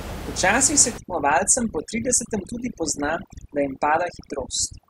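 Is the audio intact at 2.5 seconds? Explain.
No. At 2.5 seconds the clip is inside a stretch of overdone noise removal that runs from 0.98 s to the end. The noise reduction is set too strong. Frequency bands that sit near its noise estimate get pushed far down or cut out. Quiet parts of the speech are lost with them. Between phrases the background drops and breaks up into twinkling specks. The room noise, about 11 dB below the speech, is what the tool was fighting.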